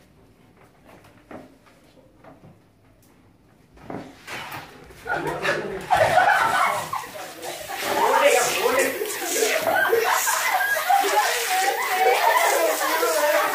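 No technical faults can be heard anywhere here.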